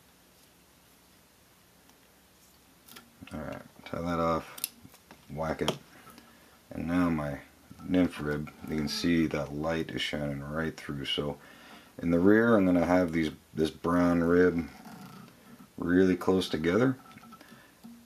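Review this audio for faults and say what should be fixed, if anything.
No faults are audible here, so nothing needs fixing.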